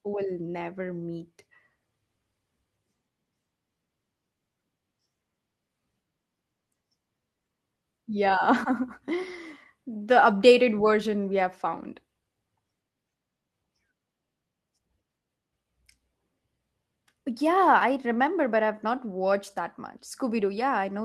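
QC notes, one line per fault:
Nothing to note: no fault was found in this speech clip.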